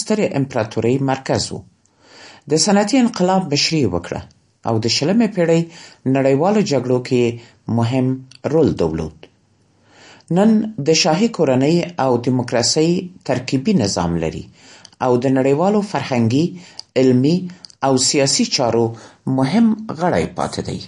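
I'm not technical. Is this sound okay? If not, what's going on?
No. The speech has a watery, swirly quality from start to finish. S sounds come out metallic and chirpy, and sharp starts of sounds are smeared. Nothing is heard above about 10.5 kHz, so the top end sounds dull. This is plainly audible MP3 compression, likely from squeezing the file too hard. When it runs short of space, the encoder cuts the treble and keeps dropping faint details, which makes that swirling sound.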